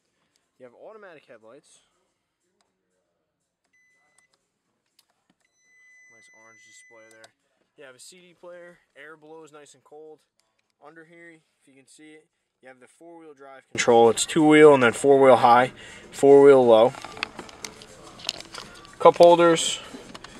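From the start up to 13.75 s the sound is almost gone, about 35 dB down, leaving only a faint residue. That's likely one channel inverted: with one side's polarity flipped, everything shared between the channels cancels in mono. It returns to full level after 13.75 s.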